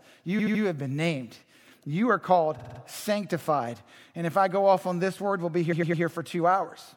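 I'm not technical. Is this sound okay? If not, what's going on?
No. The speech has three stutters caused by repeated frames, where a small chunk of the compressed audio was stored or sent more than once, so the player repeats it. Near 0.38 to 0.62 s, a 78 ms snippet plays three extra times. Near 2.58 to 2.79 s, a 52 ms snippet repeats four extra times. Near 5.71 to 6.02 s, a 105 ms snippet repeats three extra times. Each stutter also makes the clip slightly longer than it should be.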